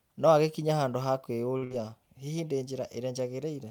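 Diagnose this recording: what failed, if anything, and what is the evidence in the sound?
At 1.57 s the speech hangs for a moment: one sound is drawn out with a faint buzzy, slightly dipped quality until 1.64 s, and then continues from exactly where it left off. This is a short stall from a late packet at the network stage. A packet missed its playout time, the jitter buffer ran dry, and the receiver stretched the last sound for about 46 ms. Nothing is lost, but playback now runs about 46 ms later.

Straight after, from 1.64 s to 1.82 s, the sound turns into a held, fading continuation and then jumps ahead, with a stretch of the speech simply gone. This is a burst of packet loss, also at the network stage. Consecutive packets never arrived in time, so the receiver extended the last sound for about 64 ms while turning it down. About 60 ms of real audio is missing where playback resumes, leaving an audible skip in the speech.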